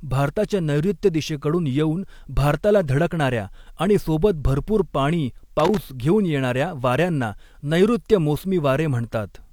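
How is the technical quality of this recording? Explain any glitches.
There's one glitch worth flagging: loose connector crackle from 5.60 to 5.81 s, where a worn contact chops the signal, giving a brief irregular scratchy burst.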